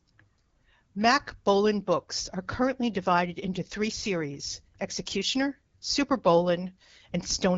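Nothing stood out on listening to this speech clip, which carries the wideband character of AMR-WB HD Voice coding at 12.65 kbit/s.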